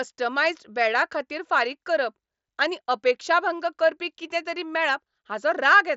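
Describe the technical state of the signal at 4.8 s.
At 4.8 s the speech comes through intact, with no fault at that moment as it passes through the Bluetooth mSBC headset codec.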